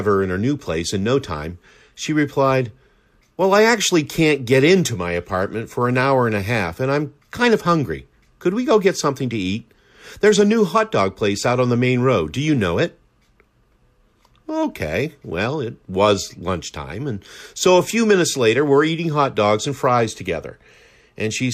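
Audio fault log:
Nothing to log here: the speech comes across without any audible technical faults anywhere in the clip.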